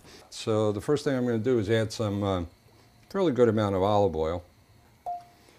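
No technical faults can be heard anywhere in the audio. There is nothing in it that calls for a timestamp or a fault description.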